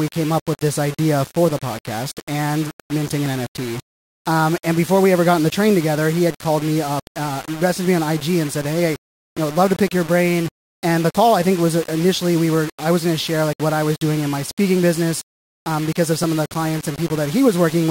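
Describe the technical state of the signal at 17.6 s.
At 17.6 s the speech carries the same grainy, gritty distortion heard through the whole clip. The roughness moves with the sound itself. Quieter moments turn harsh and sputtery, and the softest parts break up or drop out. The error sits only about 15 dB below the signal. The likely cause is low bit depth without dither. Samples were rounded to very few levels, which fits roughly 5 bits, so the error tracks the waveform instead of forming a steady hiss.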